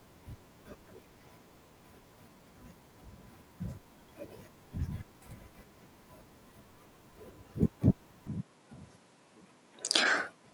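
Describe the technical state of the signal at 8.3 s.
At 8.27 s the input was likely switched to a poorer device, which holds to the end. With no silence at the switch, the sound abruptly loses everything above 11.4 kHz, drops roughly 5 dB in level, and gains a faint new background noise.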